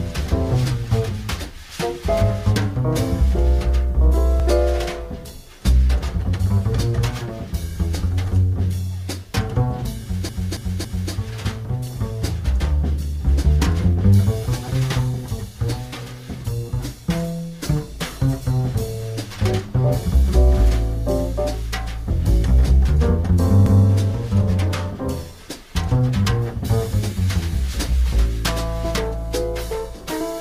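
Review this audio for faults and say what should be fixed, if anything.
Repeated frames occur twice. From 10.29 to 11.12 s, a block of about 279 ms plays three extra times, adding 836 ms and producing a stutter. From 23.66 to 23.85 s, a block of about 186 ms repeats once, adding 186 ms. The block lengths suggest runs of a few compressed frames being written or sent again, so the decoder replays the same stretch. Prevent this by deduplicating frames by sequence number or timestamp before decoding or writing.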